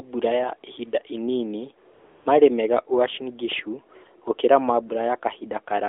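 AMR comfort noise runs from 1.94 to 2.26 s, between "mbura ya ihinda inini" and "maarĩ mega". The phone judged the line silent and stopped sending speech frames for about 320 ms, so the receiver filled the gap with smooth, steady synthetic noise that switches in and out.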